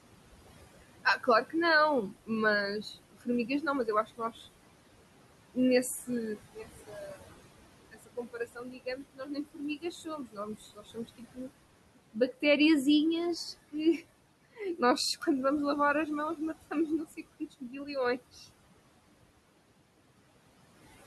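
A speech recording with room noise sitting about 14 dB below the voice shows noise suppressor artifacts from start to finish. The suppressor pulls the steady background down by about 21 dB in the gaps, so the noise floor pumps up and down with the talking. On a spectrogram the background shows as a blotchy, speckled haze that vanishes between phrases and reappears beneath them. The waveform's quiet stretches look unnaturally flat. The same processing also causes speech cut by the noise suppressor, where quieter parts of the voice were mistaken for noise and attenuated along with it. This happens at 0.82–4.46 s (around a second of speech affected in total, dropped by up to about 22 dB), 5.54–7.38 s (under a second, about 21 dB), 7.91–11.5 s (roughly two seconds, about 22 dB), 13.71–15.27 s (only a brief moment, about 20 dB) and 16.36–18.45 s (about half a second, about 16 dB). There, the affected speech sounds swallowed or faint. 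On a spectrogram the affected syllables show as faded energy, and in the waveform they appear as abruptly shrunken envelopes.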